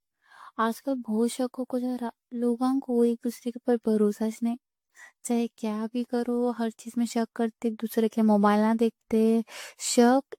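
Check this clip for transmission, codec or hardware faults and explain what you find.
One codec fault runs through the entire clip: generation loss. The speech was likely re-encoded repeatedly with AAC-LC, around seven passes at a rate that fits 96 kbit/s. Each pass requantises on a shifted frame grid, so noise and spectral gaps accumulate. The result sounds swirly and hollow, consonant attacks smear, and nothing reaches above 19 kHz.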